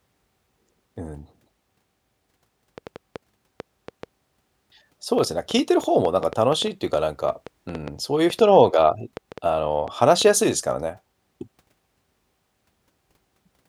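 From 2.78 s to 10.3 s, a train of clicks, around thirty, ticks through the speech at about 4.1 per second with uneven spacing. It is likely interference or a faulty connection. The clicks poke a few dB above the speech and appear as thin vertical lines on a spectrogram and sharp spikes on the waveform.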